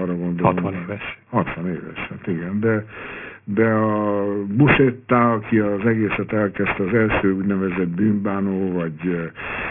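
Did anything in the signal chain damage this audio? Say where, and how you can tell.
Yes. The damage sits at the sample-rate conversion stage, and it runs through the whole clip. This is aliasing. Sibilants sound gritty and metallic rather than hissy. The spectrum is packed right up to a hard edge at 3 kHz, which points to a drop to a 6 kHz rate. High speech energy was never filtered out first. It folded back below 3 kHz as false tones, at a strong level, roughly 10 dB under the speech itself.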